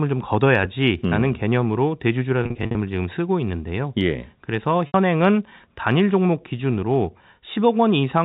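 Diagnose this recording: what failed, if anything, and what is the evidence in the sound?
The network stage failed, causing packet loss with pitch repetition at two points in this speech. From 2.43 to 2.75 s, about 210 ms goes missing in scattered gaps, none longer than 50 ms, heard as a buzzy, held warble. At 4.87 to 4.94 s, a single 70 ms gap holds briefly, then fades into silence before the speech returns with a short cross-fade. The receiver loops the last pitch cycle into each hole, so the waveform shows identical repeating periods, and the spectrogram shows frozen, evenly spaced harmonics.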